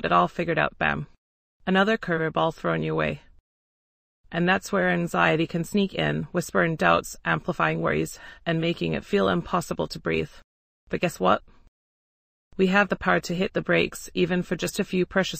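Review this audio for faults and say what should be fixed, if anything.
Nothing in this audio needs fixing; no faults are audible.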